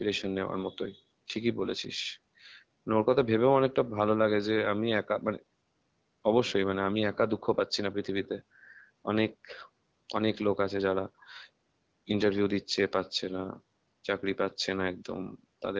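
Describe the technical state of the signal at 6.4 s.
At 6.4 s the speech is intact, with no fault present at that moment.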